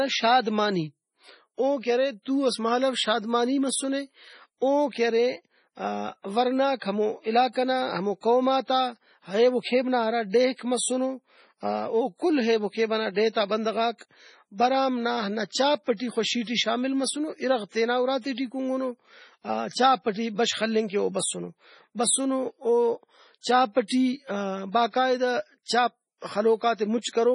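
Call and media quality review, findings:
Whole clip, throughout. Speech sounds watery and swirly, with metallic chirps on s sounds and smeared consonant onsets. Nothing above 10.5 kHz. Likely MP3 compression: the starved encoder cuts the treble at a fixed point and drops weak frequency lines, which flicker between frames. Heavy damage, which fits a very low bitrate, around 24 kbps.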